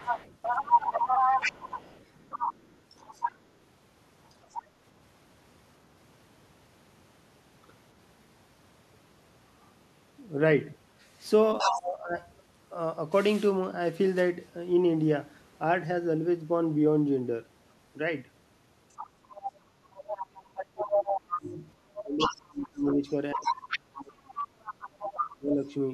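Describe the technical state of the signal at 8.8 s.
No fault can be heard at 8.8 s, and the speech signal is intact at that moment.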